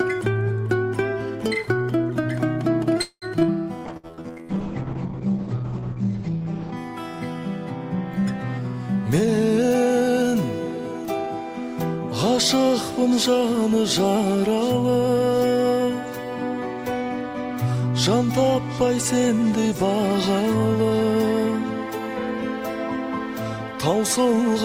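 Around 3 s the audio runs into a tight cluster of network trouble. At 3.01 s the sound stalls for roughly 0.23 s: the last bit of audio is stretched into a fading buzz or hiss for about 150 ms, drops to near silence for about 50 ms, then picks up exactly where it left off with nothing lost. That's a call audio freeze, likely packets held up in transit until the jitter buffer ran dry. Right after, there are two skip aheads at 3.40 s and 3.47 s, each a quick jump forward that drops something like 70 ms of audio, with the two sides spliced almost directly together as audio was dropped while later audio was already waiting. From 3.79 to 4.58 s a jitter buffer slow-down kicks in: playback runs at about 90% speed with the pitch unchanged, adding roughly 90 ms, as the receiver repeats single pitch periods to rebuild its reserve, so sounds feel drawn out. Overlapping that, from 3.91 to 6.83 s, there's a call bitrate drop from 48 to 9 kbps, held at the bottom for about 2.7 s. 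The encoder, starved of bits, codes everything coarsely and the bandwidth collapses from 20 kHz to 8 kHz, leaving the sound rough, watery and muffled. Inside that stretch, at 3.97 to 4.06 s, a burst of packet loss wipes out about 60 ms, papered over by a held, fading tail of the previous sound before the audio resumes further on. Later, from 9.20 to 10.73 s, a jitter buffer speed-up runs playback at about 113% at the same pitch, trimming around a fifth of a second as the buffer sheds excess delay, so that passage sounds hurried.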